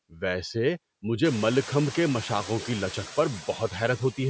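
Speech with noise suppressor artifacts throughout: the room noise, which rises around 1 s to about 16 dB below the voice, is pulled down by about 21 dB between phrases and swells back underneath them. Unlike a gate, which silences everything at once, this works band by band. The call microphone processing limits the audio to nothing above 8 kHz.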